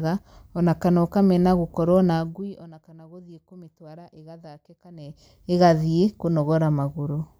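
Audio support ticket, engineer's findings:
Zipper noise, 2.14 to 2.69 s, just before "kana gũthiĩ". Fine ticking rides on the speech while level falls by about 25 dB. Probable component: gain stage. Mechanism: level stepped without smoothing, around 300 steps a second, each step a tiny jump that clicks.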